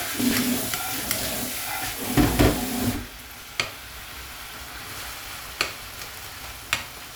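A background task is stalling the USB bus or audio driver on a fixed cycle in this everyday-sound recording, and each stall drops about 10 ms of audio, skipped outright rather than filled with silence. These periodic USB or driver dropouts repeat every 0.115 s from 0.08 s to 7.10 s, around seventy in all, heard as an evenly spaced train of ticks or pops riding on the sound wherever signal is present.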